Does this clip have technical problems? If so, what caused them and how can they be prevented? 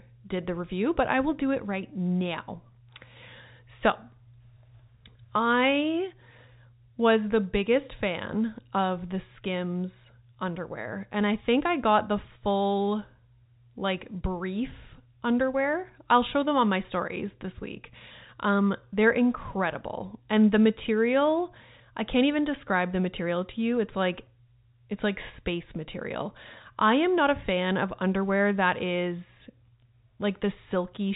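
No, the speech comes through as ordinary telephone-band audio with nothing above 4 kHz, which fits G.711 mu-law coding at 64 kbps, and nothing in the signal points to a technical problem.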